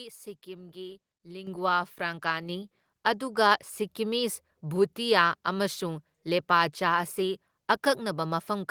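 At 1.47 s and again at 2.49 s the microphone volume is stepped up, rising by about 8 dB and then about 5 dB as the call software boosts a quiet input. Speech and background jump together, showing as abrupt steps in the waveform envelope and brighter spectrogram bands.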